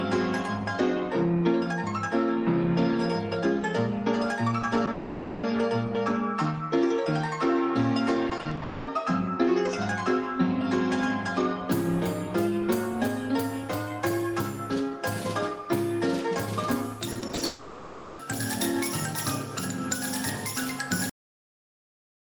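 At 4.61 and again at 4.85 s there is short concealed packet loss: about 20 ms of audio went missing each time, and the receiver papered over it by extending the preceding sound. Each shows up as a brief smear or wobble rather than a gap. What separates these from the robotic stretches later is that each is a single, isolated patch. The audio runs normally between them instead of breaking up continuously.

Almost immediately afterwards, from 4.91 to 5.45 s, the audio turns into a long network dropout, likely from the connection stalling. For 520 ms the original material is gone, and what fills it is a synthetic continuation: the last sound stretched into a buzz or hiss. It never collapses into silence before the real audio resumes. Its length is what marks it out from the short losses. It is a sustained artificial tail, not a momentary blur, and whatever was happening during that half second is simply skipped.

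From 8.29 to 8.63 s comes repeated packet loss, heard as robotic sound. Six separate holes, none longer than 40 ms, add up to 140 ms of patched audio, about 41% of that stretch. The rapid alternation of real and extended fragments gives a choppy, robotic texture. This runs straight into a second long network dropout, likely another stall, from 8.63 to 8.89 s. There, 240 ms is replaced by one continuous fill, a fading buzz or hiss instead of the stutter just before it.

The same sequence happens again later. From 17.11 to 17.43 s, six gaps cover about 44% of the span with the same choppy, robotic breakup. Then, from 17.45 to 18.21 s, comes the longest dropout, likely a further network stall, where 740 ms is filled by a continuation that lingers as a fading buzz before the real audio returns.

At 21.10 s comes a cut-off end. The audio stops mid-sound and drops straight to digital silence for the rest of the clip. 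Unlike the dropouts, there is no concealment tail or fade at all, only an abrupt halt, possibly with a click, and nothing resumes.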